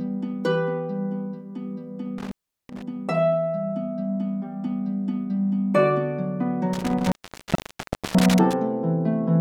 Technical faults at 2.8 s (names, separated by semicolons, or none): intermittent contact